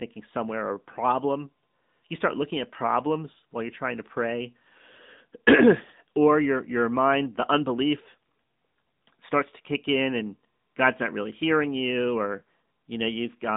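Throughout the speech, the AMR narrowband mobile codec is at work. Nothing above about 3.8 kHz survives, and the low end thins below about 150 Hz, giving the familiar phone-line band. What separates it from a simple telephone band-limit is the plainly audible codec damage. Each 20 ms frame rebuilds the voice from a vocal-tract model and a few pulses, leaving a buzzy, synthetic edge. That edge fits a higher-rate mode near 10.2 kbps.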